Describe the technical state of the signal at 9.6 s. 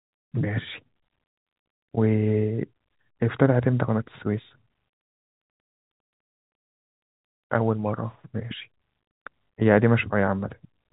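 At 9.6 s the speech is intact, carried through the G.711 telephone coding with its usual band limit of nothing above about 3.8 kHz.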